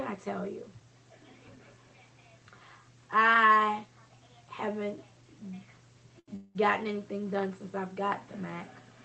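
A short stall from a late packet occurs at 6.19 to 6.30 s. A packet did not arrive when due, so the jitter buffer ran dry and the receiver stretched the last bit of sound across an 82 ms gap until the data turned up. Playback then resumed from the same point, so nothing is lost, but the sound is held too long there, with a buzz or dip, and everything afterwards is pushed 82 ms later.

A call audio freeze follows at 6.36 to 6.57 s, where the sound is replaced for 193 ms by a continuation of the last sound as a buzz or hiss that fades without reaching silence. The likely cause is packets held up in transit, emptying the jitter buffer again. When they arrived, playback picked up where it had stopped. Nothing is missing, but a further 193 ms gap is inserted, which adds to the earlier delay. Throughout, the audio is cut off above 8 kHz by the call codec.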